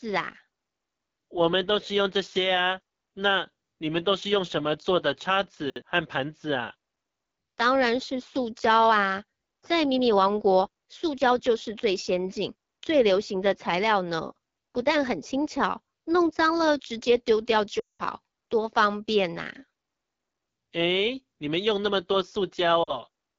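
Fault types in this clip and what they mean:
AMR wideband (HD Voice) codec: Speech sounds rough and raspy throughout, which fits AMR-WB at one of its lowest rates, 8.85 kbit/s, coding speech with a pulse-excited vocal tract model.
Chunks out of order: Brief jumbled moments near 5.7 and 14.58 s, where a 60 ms piece of audio plays one slot late, leaving hard joins.
Lost AMR speech frames: Sound drops to near silence for about 200 ms at 17.80 to 18.02 s, and dips briefly at 22.83 s, as the decoder repeated its last good settings at falling level.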